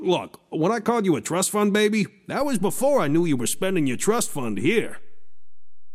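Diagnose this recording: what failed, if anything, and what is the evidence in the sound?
A DC step at the converter or analogue input: at 2.41 s a single low thump marks the zero line jumping by about -29 dBFS and holding to the end, while the sound itself runs on unbroken, unlike a dropout or click.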